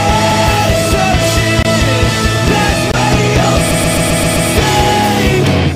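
At 1.63 to 1.65 s and again at 2.92 to 2.94 s the sound drops out for a split second, heard as a tick with a tiny hole behind it. Each is a block of digital silence: a stretch of about 23 ms, then about 22 ms, was replaced by zeros. The first fits a 1024-sample buffer the program failed to fill in time. The signal cuts to nothing and back with no fade.

From 3.70 to 4.48 s the audio stutters, the same brief fragment playing over and over. These are repeated frames: a 130.6 ms chunk of compressed data, consistent with a run of about five frames, was sent again six extra times, and the decoder faithfully played each copy. The loop stretches the clip by about 0.78 s.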